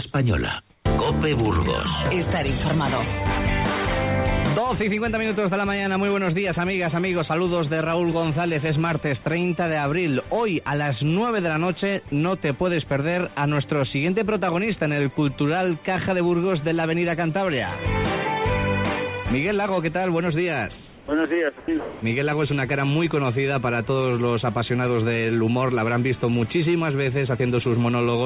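The audio runs through a narrowband call path with nothing above 4 kHz, which fits G.711 A-law at 64 kbps. The sound dropped by the voice detector shows up as short clips at 0.12–0.14, 12.08–12.12 and 21.6–21.68 s, where a sliver of real sound gives way to flat noise, likely because the detector mistook it for background and stopped sending. Comfort noise in place of the background appears at 0.7–0.84, 20.76–21.08 and 21.8–22.02 s: the real background turns into steady, featureless hiss, likely from discontinuous transmission, and in the last patch it steps up by about 4 dB.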